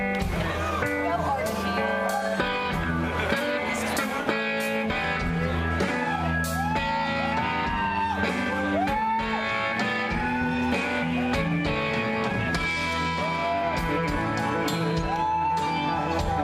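At 4.21 to 4.27 s there is AAC frame loss with concealment: roughly 43 ms of coded audio failed to arrive, consistent with two lost frames. The decoder rebuilt the gap from the preceding spectrum, producing a brief smeared, noisy patch.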